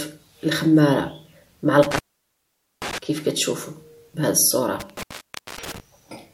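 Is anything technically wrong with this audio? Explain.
Yes, intermittent contact occurs twice, from 1.83 to 2.98 s (open 830 ms) and 4.80 to 5.80 s (open 553 ms): a loose connection breaks, dropping the sound with crackly edges, unlike a clean digital dropout.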